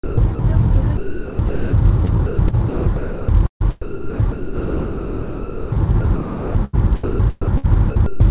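Sound chopped by the voice detector recurs at 0.04–0.39, 0.97–1.73, 2.05–3.62, 2.68–3.28, 3.82–5.75, 6.01–6.75 and 7.04–8.2 s. It is likely caused by a sender gating off quiet stretches and filling them with comfort noise. On a spectrogram, detail gives way to flat, featureless noise. The waveform shows smooth, even-level patches. All content stops near 4 kHz, which fits a narrowband call codec.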